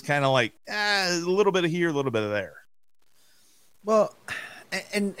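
From start to finish the speech carries a gritty, grainy distortion that tracks the signal, most likely from low bit depth without dither. The level steps sound coarse, which fits about 9 bits, and the samples were rounded down without added noise. Because the error follows the waveform, quiet syllables sound rough. The error sits roughly 40 dB below the speech. A zoomed waveform shows visible staircase steps, and the spectrogram shows signal-dependent hash rather than a steady noise floor.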